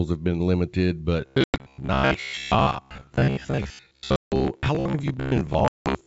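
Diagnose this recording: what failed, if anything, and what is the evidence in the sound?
Robotic sound from repeated short buffers, from 1.21 s after "have been limited" to the end: a rigid metallic buzz at 66.8 Hz. This likely comes from driver or buffer underruns repeating a roughly 15 ms buffer.

Packet loss on an ADPCM call at the network stage: hard-edged silent holes at 1.44–1.61 s (120 ms lost), 4.16–4.33 s (160 ms) and 5.68–5.95 s (180 ms). The decoder's predictor then mistracks on resumption.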